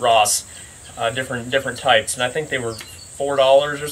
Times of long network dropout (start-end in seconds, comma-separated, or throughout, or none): none